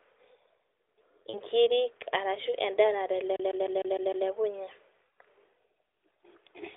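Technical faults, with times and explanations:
1.30–1.40 s, lost AMR speech frames: about 40 ms of the speech goes missing, which fits two dropped 20 ms frames. The decoder papers over the gap by repeating its last good settings at falling level, so you get a short dip and warble before the speech recovers a bit rough.
3.36–4.28 s, CD stuck on one turn: a fast, even stutter as the same 0.15 s slice replays about six times, each pass split by a tiny mute where the laser jumps back a track. It is heard through the narrowband 300–3600 Hz phone-line band.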